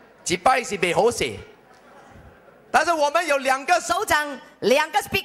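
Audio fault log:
3.90–5.25 s, section at the wrong speed: from 3.90 s to the end, this stretch is played back 1.18 times faster than it was captured, likely because a player or editor resampled it against the wrong clock. Time and pitch are tied together in that conversion, so the sound abruptly hurries and rises by about three semitones at once, and stays raised and compressed until the clip ends at 5.25 s.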